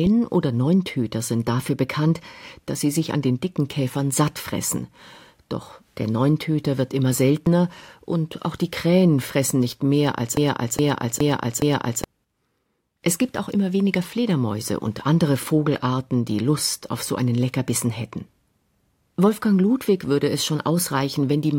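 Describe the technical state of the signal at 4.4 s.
At 4.4 s the speech signal is intact, with no dropout, click, distortion or other audible fault at that moment.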